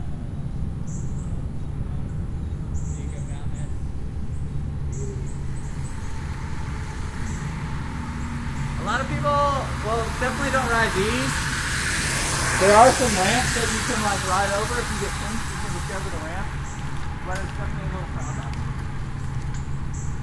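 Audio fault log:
No audible faults detected.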